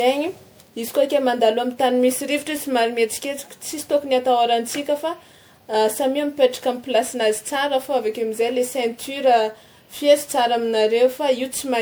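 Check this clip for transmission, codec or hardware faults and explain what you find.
The speech shows one fault, present for the whole clip: generation loss. The likely cause is repeated lossy coding, with the audio decoded and re-encoded around seven times through MP3 at a rate that fits 128 kbit/s. Each pass re-quantised the signal on a shifted frame grid, so the errors stacked up instead of staying fixed. The result is a swirly, hollow, smeared texture beyond what that bitrate alone gives, with blurred consonant attacks and nothing above 20.9 kHz.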